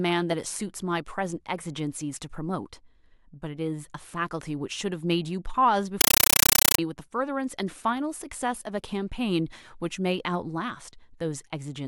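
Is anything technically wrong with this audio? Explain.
Yes. From 6.01 to 6.79 s, a compressed stream is played as audio: AC-3 data is treated as PCM, giving loud chattering static. The waveform shows 8 ms noise bursts repeating 31.25 times a second with flat silence between. The spectrogram shows broadband vertical stripes, which fits a 384 kbps Dolby Digital bitstream.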